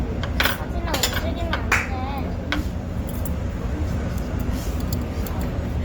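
Opus compression runs through the whole clip, and the sound is plainly damaged by it. Content still reaches about 20.3 kHz, so the band is not narrowed. But with too few bits to describe each band in detail, the encoder keeps each band's overall energy and fills in the fine structure, turning clean tones rough, grainy and noisy rather than swirly. This points to Opus in its music mode at a likely low bitrate near 24 kbps.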